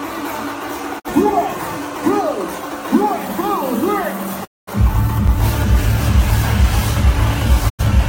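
At 0.98 to 1.10 s, a digital broadcast dropout mutes the sound with a 20 ms fade. The receiver lost frames and muted until good ones returned; the hole fits one lost frame. A longer dropout follows at 4.44 to 4.72 s, about five frames' worth. At 5.28 s a block of digital silence, about 5 ms, cuts out and back with no fade and is heard as a tick. The output buffer likely went unfilled, which fits a 256-sample block. A final dropout at 7.68 to 7.84 s fades out again, suggesting two lost frames.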